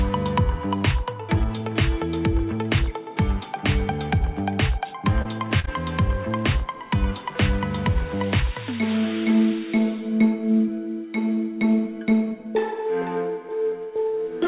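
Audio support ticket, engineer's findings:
Short concealed packet loss at 5.22–5.39 s, 5.60–5.66 s and 5.66–5.69 s: brief smears as the jitter buffer extrapolates the last waveform over 20–40 ms gaps. Spectrogram shows smooth repeated harmonics or noise patches, then a blend back into the real audio at the handover. Content stays band-limited below 4 kHz, which fits a G.711 call path.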